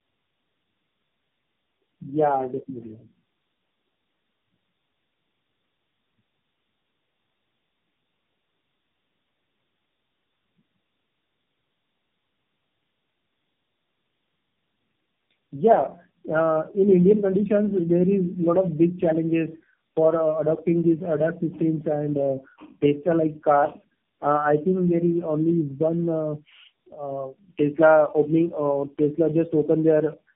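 Throughout the clip, the speech shows tandem speech coding. Three low-rate coders run in a row, which fits AMR-NB stages joined by G.711, and each re-encodes the previous decoded output. The damage compounds into rough, muffled, warbly speech with nothing above 3.7 kHz.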